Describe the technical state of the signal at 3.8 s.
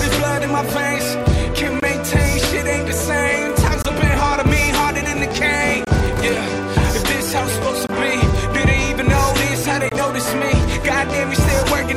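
Right at 3.82 to 3.85 s there's a gap between chunks: about 23 ms of silence dropped in where two roughly 2-second blocks of audio meet, likely from padding or a late-starting chunk. Nothing's lost, but you hear a short hole.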